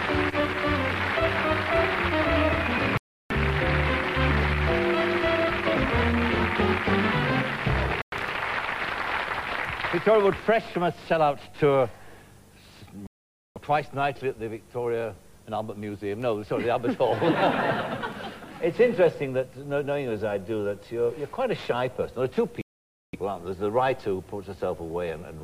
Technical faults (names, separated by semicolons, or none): Bluetooth stall